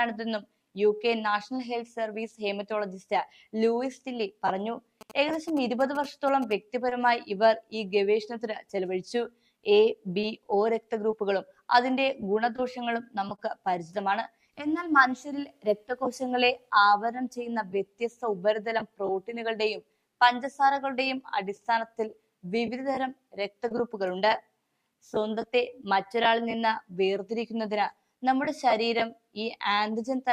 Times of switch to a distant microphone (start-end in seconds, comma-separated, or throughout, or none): none